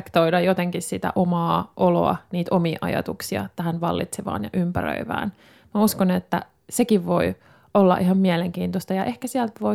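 Nothing in the speech here stands out as a technical fault; there's no moment where something goes wrong.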